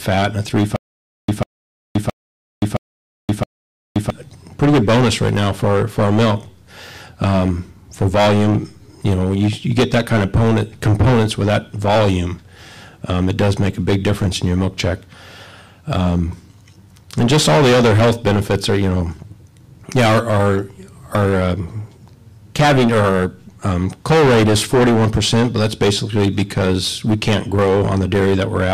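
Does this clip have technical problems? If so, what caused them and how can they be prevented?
Yes. The player or stream likely stalled and replayed its last fragment at each retry, causing a stutter with silent gaps from 0.76 to 4.10 s. A 145 ms burst repeats five times, every 668 ms, with 523 ms of digital silence between, and the audio in between is lost. Larger playback buffers and retries that resume rather than replay would prevent this.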